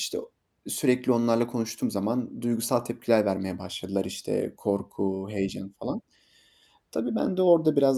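No technical faults can be heard anywhere in the speech, with the signal holding steady and continuous throughout.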